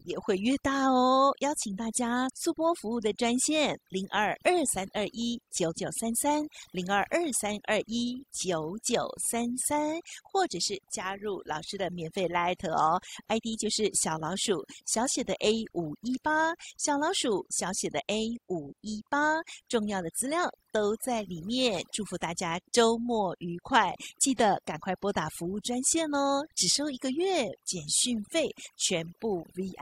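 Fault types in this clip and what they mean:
overdone noise removal: a noise reduction stage set far too aggressively, pulling down any frequency band close to its noise estimate. Across the whole speech clip the background drops and breaks up into twinkling specks, and quieter components of the voice are stripped along with it.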